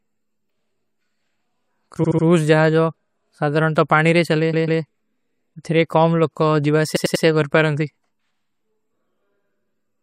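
A speech recording with plainly audible compression damage throughout, most likely from MP3 compression at a low rate that fits roughly 64 kbps. Quiet spectral detail drops in and out from frame to frame, giving the speech a watery, swirling texture. Sibilants pick up metallic chirps and consonant onsets sound smeared. Three stutters come from repeated frames, where a short block of compressed data is decoded again and replayed. From 2.03 to 2.25 s a 72 ms block plays three extra times, adding 216 ms. From 4.53 to 4.81 s a 144 ms block plays twice more, adding 288 ms. From 6.95 to 7.24 s a 96 ms block repeats three extra times, also adding 288 ms. The block lengths fit runs of several MP3 frames being sent or written more than once.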